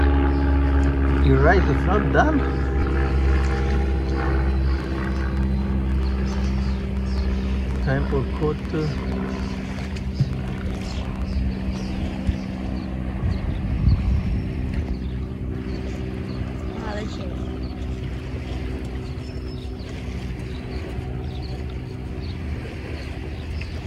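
Likely interference or a faulty connection injects a train of clicks from 4.80 to 11.34 s: uneven pops, 6.3 per second, louder than the sound.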